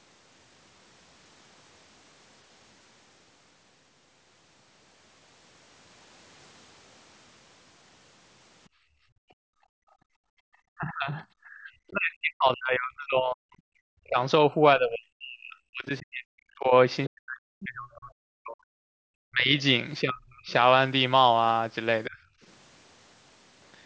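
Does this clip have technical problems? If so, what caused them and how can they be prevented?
Yes. From 8.69 to 10.48 s the room background sinks by up to about 33 dB and comes back, the sign of background gated by the echo canceller: while the far-end loudspeaker played, the canceller clamped the microphone hard. Better loudspeaker-to-microphone isolation or a gentler suppression setting would prevent it.

The voice itself dips deeply, thins out or breaks into fragments at 10.76 to 14.18 s, 14.49 to 16.73 s, 17.08 to 18.95 s, 19.30 to 19.53 s, 20.01 to 20.50 s and 22.08 to 22.18 s. This is likely speech suppressed in double talk, where the canceller mistook overlapping talk for echo and turned both down. Using a headset or an echo canceller with stronger double-talk detection would prevent it.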